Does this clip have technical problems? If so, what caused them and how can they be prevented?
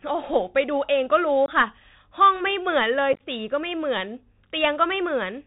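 Yes. The speech sounds muffled and scratchy throughout, with a granular hiss and harsh s sounds. This is the Bluetooth CVSD headset codec, which codes one bit a sample with adaptive steps and passes nothing above 4 kHz, which fits a 64 kbps link. To prevent it, use a headset and phone that negotiate a wideband codec such as mSBC, or record on a wired microphone.

Short holes with abrupt edges break the speech at 1.46 to 1.49 s, where about 22.5 ms goes missing. At 3.13 to 3.22 s, roughly 49 ms of dropouts are scattered over 67.5 ms, with the longest gap 15 ms. This is unconcealed Bluetooth headset packet loss: a handful of voice packets, then a dozen or so, never arrived and were replaced by silence or an idle pattern. To prevent it, keep the headset close to the phone with a clear line of sight and away from Wi-Fi and other 2.4 GHz interference.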